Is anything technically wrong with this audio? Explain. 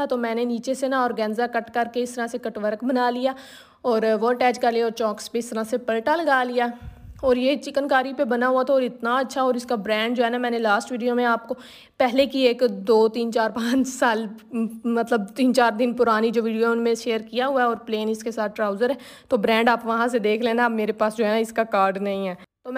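No, nothing here stands out as a technical problem; it all sounds just as it should.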